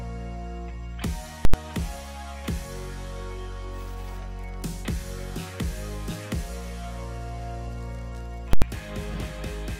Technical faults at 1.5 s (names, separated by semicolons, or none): invalid numbers at full scale